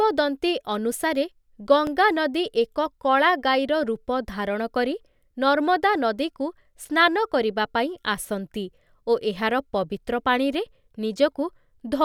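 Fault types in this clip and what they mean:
Underrun with held sample: at 1.87 s the output buffer ran dry for about 1.3 ms, a 64-sample gap, and the converter froze on its last value until data arrived. On the waveform this shows as a short flat shelf. Roughly a millisecond and a half of the speech was skipped, so playback resumes further on rather than where it stopped.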